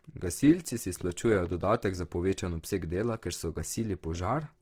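From the start, the speech is grainy and rough, with tones turning noisy rather than clean. This is likely Opus compression in its music (CELT) mode. At a low bitrate, which fits roughly 16 kbps, it keeps each band's energy but fills starved bands with folded or noise-like content. A spectrogram shows a fullband spectrum reaching about 20.4 kHz, with few holes but smeared, speckled texture where harmonics should be crisp.

From 1.01 to 1.53 s, just before "dodatek za povečan obseg", a train of clicks ticks over the speech, likely from electrical interference or a faulty connection. There are around seven similar pulses at an irregular pace averaging 9.7 per second, peaking roughly 5 dB above the surrounding signal. In the waveform they are narrow spikes standing out from the speech envelope. On a spectrogram they are thin vertical lines spanning the full frequency range.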